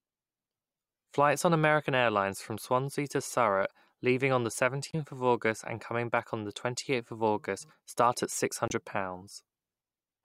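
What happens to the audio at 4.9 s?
A corrupt frame decoded runs from 4.88 to 4.95 s, just after "leaving on the". Flipped bits in what sounds like roughly three consecutive compressed frames were played out rather than concealed, so misread gains and codes scatter energy into frequencies that don't belong to the speech there. For those 68 ms the result is a short chirp-like burst of noise, peaking at around -20 dBFS.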